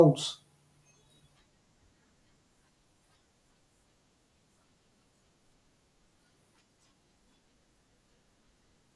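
Nothing in the speech stood out as a technical fault on listening.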